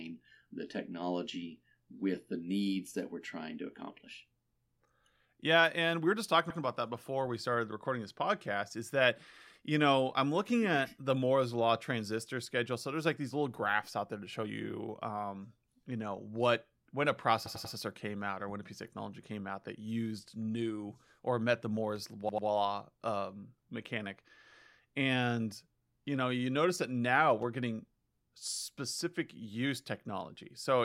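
Repeated buffer at 6.50, 17.46 and 22.29 s: audio arrived late, so playback replayed a 93 ms chunk one, three and two extra times, producing hard-edged stutters.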